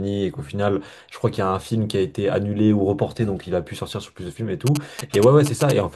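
From 4.67 s to 5.72 s, GSM signalling bursts break through beneath the speech as a galloping dit-dit-dit of short buzzes pitched near 217 Hz, only a little quieter than the voice. A nearby 2G phone exchanging brief radio bursts induces this interference, which the audio circuit rectifies into sound. Its stop-start rhythm sets it apart from steady mains hum and from the unbroken buzz of a phone in an active call.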